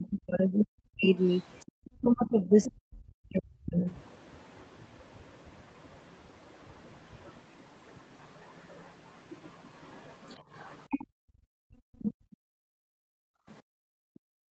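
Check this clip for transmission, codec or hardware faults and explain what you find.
Echo-canceller trouble runs through this speech clip: double-talk suppression, leaking far-end speech, and background gating. The band stops near 8 kHz throughout, consistent with the Opus call path.

Speech suppressed in double talk affects 0.0 to 3.88 s, about 3 s in total, with a further brief dip at 12.66 to 12.77 s. The canceller likely mistook the talker for loudspeaker echo and attenuated both, by roughly 40 dB at the deepest. You hear chopped, dropping speech. The waveform shows sudden envelope collapses, and the spectrogram shows vertical gaps across the band.

The other side's voice leaks through at 1.6 to 2.72 s, 8.24 to 11.07 s, 12.01 to 12.13 s and 13.52 to 14.50 s. The likely cause is residual loudspeaker echo that the canceller didn't fully remove. It sits about 15 to 35 dB below the talker and sounds like a faint second voice. 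On a spectrogram it appears as weak, separate harmonic traces.

The background is gated by the echo canceller from 11.07 s to the end. While the loudspeaker plays, the canceller clamps the microphone, pulling room sound down by about 40 dB. The ambience pumps and vanishes, which shows as the noise floor dropping to near-black between speech bursts.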